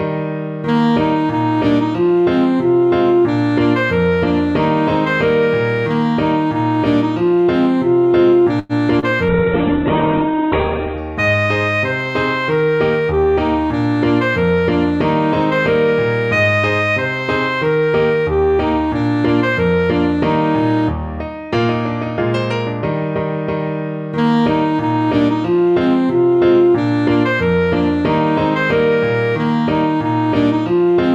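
At 8.59 to 8.72 s the audio stalls: the last sound is stretched into a fading buzz or hiss for about 100 ms, then resumes exactly where it left off. This is a call audio freeze, likely caused by delayed packets draining the jitter buffer. Unlike packet loss, nothing is skipped; a gap is inserted and the delay grows by 100 ms. At 8.99 to 9.05 s a short concealed packet loss follows: 60 ms of real audio never arrives and is covered by about 30 ms of continued, blended sound. It is heard as a brief smear rather than a pause, and here content really is missing. From 9.29 to 11.10 s comes a call bitrate drop, with the encoder falling from 128 kbps to 7 kbps and staying at the bottom for about 1.7 s. The bandwidth narrows from 20 kHz to 4 kHz, so the sound turns muffled, and the coarse coding also makes it watery and rough. That roughness distinguishes it from simple low-pass filtering. From 12.87 to 13.26 s a jitter buffer speed-up plays the audio at 119% speed by cutting out pitch-period-sized pieces, roughly 70 ms in total. 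Because the pitch stays put, it sounds hurried rather than higher, unlike a resampling error.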